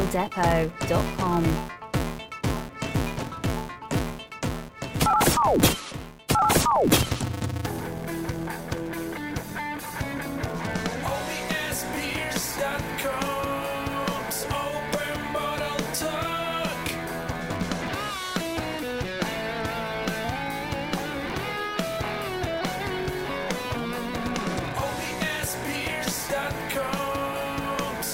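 A buzz runs under the audio from start to finish. It comes from a filter restarted on every block. The filter loses its memory at each block boundary and begins again from silence. Each restart leaves a small transient. These clicks repeat 200 times per second, which points to blocks about 5 ms long. Together they form a steady 200 Hz buzz. It rises and falls with the level of the sound.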